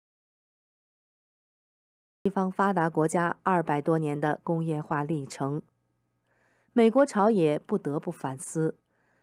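Speech recording that opens in an audio dropout to silence: from the first sample to about 2.26 s there is nothing but silence, with no room tone or noise floor, and the speech then starts abruptly mid-flow. The dropout is already under way when the clip begins, so whatever was spoken before 2.26 s is lost. The likely cause is a lost input, such as a disconnected device, a failed link or a stray mute, while the recorder kept writing.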